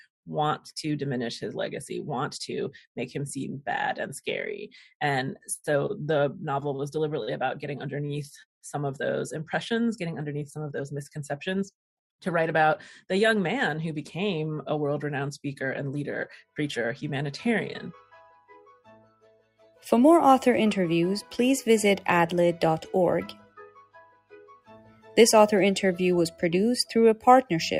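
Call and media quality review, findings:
Noise suppressor applied to music or sounds, whole clip. Level pumps and flutters by around 5 dB as a speech-tuned suppressor treats sustained tones, ambience and reverb as noise. Attacks pass; held material and tails sag. Waveform: envelope dips after each onset. Spectrogram: sustained bands and reverb tails thin and smear between transients, with a patchy, gated look.

Sound cut by the noise suppressor, 18.68–19.84 s and 23.35–25.16 s. Sustained or decaying content ducked hard, deepest about 17 dB and about 19 dB, for roughly one second and roughly two seconds. Same suppressor misclassifying it as noise. Waveform: sudden envelope trough, tails truncated. Spectrogram: darkened, hollowed-out blocks across those spans, onsets intact.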